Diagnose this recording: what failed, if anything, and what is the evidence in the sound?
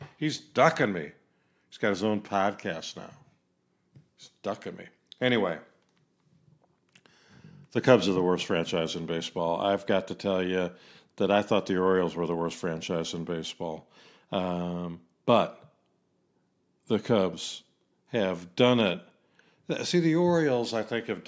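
Nothing in the chain has failed: the speech signal arrives intact, with no audible damage or disturbance introduced at any stage between capture and playback.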